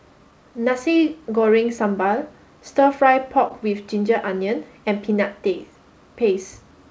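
A speech clip heard through a call codec, with its top end stopping at 8 kHz, which fits G.722 at 64 kbps. One short concealed packet loss sits between 3.48 and 3.52 s. About 20 ms of audio never arrived in time. The receiver patched roughly 18 ms of it by extending the preceding sound, then blended back into the real signal. The result is a brief smear or wobble, and a short consonant there may drop out.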